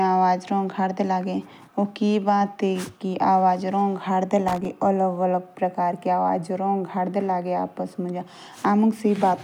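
A worn or dirty contact somewhere in the signal path briefly lost its grip at 4.48 s, making and breaking the connection in rapid succession until 4.65 s. That loose connector crackle chops the speech into fragments for roughly 0.17 s, and each time the contact snaps back, any DC sitting on the line adds a pop. The result is a short, irregular burst of scratchy crackle laid over the speech.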